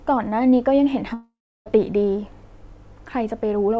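From 1.14 to 1.68 s, likely a long network dropout: sound smears into a fading buzz, then near silence, showing as a blurred spectrogram band going blank and a flat waveform.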